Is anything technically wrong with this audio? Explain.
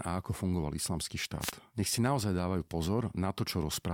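Yes. From 1.40 to 1.52 s, just after "a ako fungoval islamský", a brief swish of static is heard: a wireless microphone noise hit, where reflected radio paths cancel and receiver noise surges.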